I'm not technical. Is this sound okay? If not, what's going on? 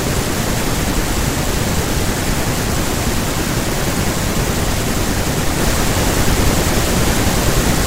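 No. From 5.59 s to the end, the speech becomes loud hiss: samples built from the wrong bytes, so each sample's fine detail swamps its real value.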